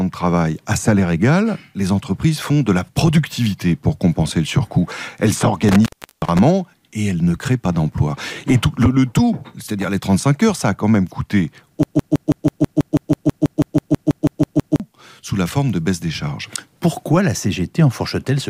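A loose cable or plug briefly loses contact between 5.69 and 6.39 s, an intermittent contact fault. The signal path opens for about 360 ms within that span, so the sound drops out abruptly with crackle at both edges. Faint hiss remains while the connection is broken, and the audio snaps back when contact is restored. From 11.83 to 14.80 s comes a broken-record loop, most likely caused by the player, encoder or stream stalling and resending the last fragment it held. A 163 ms slice repeats exactly, back to back, 18 times, giving a stuttering, mechanical rhythm. The audio that should have played during those three seconds is lost, and normal playback resumes only after 14.80 s.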